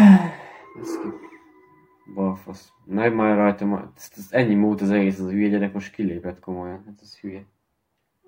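From 0.52 to 1.06 s, and again from 6.73 to 8.04 s, the sound runs about 6.2% fast and sits 104 cents sharp, just over a semitone, before snapping back to normal pitch. The likely cause is a drift correction step, where clock-matching software briefly altered the playback rate to rebalance its buffer. A spectrogram shows every harmonic stepping upward together at the start of each span, and the waveform's periods visibly compress within those spans.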